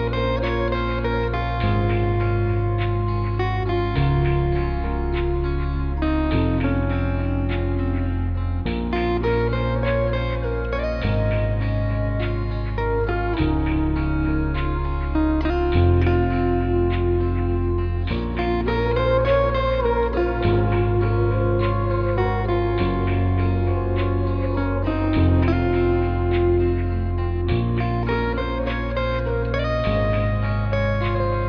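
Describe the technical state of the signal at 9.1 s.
At 9.1 s the signal is intact, with no dropout, distortion, glitch or other fault audible at that point.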